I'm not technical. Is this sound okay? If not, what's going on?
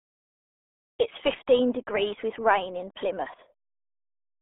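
No. The whole clip, from start to finish, has gone through the RealAudio 14.4 codec. This is an old format built for dial-up modems. It squeezed speech into a very small stream of data. To do that, it throws away everything above about 3.8 kHz, so the crisp top of the speech is gone. It also keeps only a narrow band, roughly 250 Hz to 3.5 kHz, like a phone line. The heavy squeezing makes the speech sound muffled and gargly.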